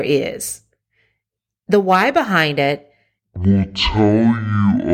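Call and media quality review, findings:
Section at the wrong speed, 3.36 s to end, right after "the why behind it". Playback drops to half speed, pitch falls roughly ten semitones, sounding slow and deep. Likely a resampler or player clocking this chunk at the wrong rate.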